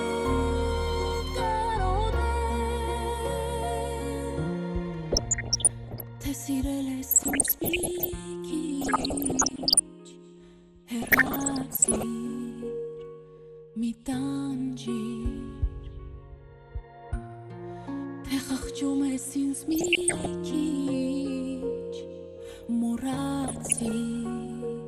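The whole clip sounds dull and gurgly, with upper bands flickering away, likely MP2 compression at a low rate that fits about 80 kbps, a constant coarseness rather than bursts. DAB burbling adds short blips of noise at 5.04–6.03, 7.11–8.11, 8.81–9.80, 11.02–12.03, 19.62–20.26 and 23.41–23.91 s, where roughly 0.7 to 1.5 percent bit errors corrupt single sub-bands.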